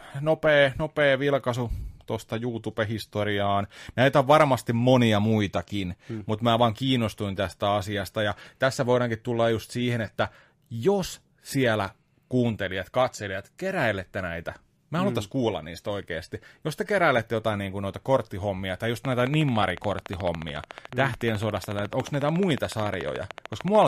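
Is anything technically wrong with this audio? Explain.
Yes. Likely interference or a faulty connection injects a train of clicks from 19.05 to 23.83 s, after "noita korttihommia tai just": some seventy regular ticks at 13.8 per second, about 10 dB above the speech.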